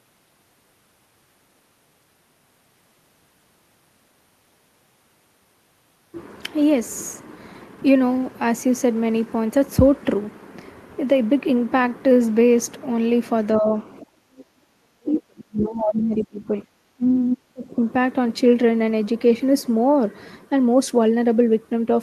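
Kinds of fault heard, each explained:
Speech suppressed in double talk: the speech dips and chops out from about 13.6 to 17.8 s, likely the echo canceller ducking everything while both ends talked, with drops of roughly 40 dB at worst.
Background gated by the echo canceller: the room sound is briefly pulled down by about 19 dB from 14.05 to 14.29 s while the canceller clamps on loudspeaker playback.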